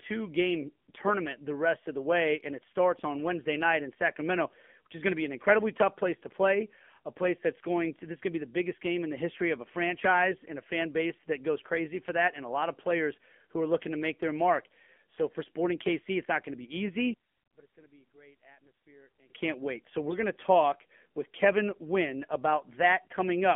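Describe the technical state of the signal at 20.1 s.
At 20.1 s the speech is passing through the AMR narrowband mobile codec. Nothing reaches above about 3.5 kHz, and little comes through below 200 Hz. The codec rebuilds the voice from a vocal-tract model driven by sparse pulses in short subframes. The synthetic, buzzy quality here is plainly audible, which fits one of the lower AMR-NB modes, around 7.4 kbps. This limited band and coloration run through the whole clip.

On top of that, AMR bit errors hit from 20.08 to 20.18 s, just before "going to talk with". The burst hits three 20 ms frames, with an error rate of a few percent. The core bits still checked out, so the decoder accepted the frames. But flipped bits put the excitation pulses in the wrong places and skewed the finer gain and spectral values. Pitch and level hold roughly steady, while the sound turns hoarse, scratchy and gargly for about a tenth of a second.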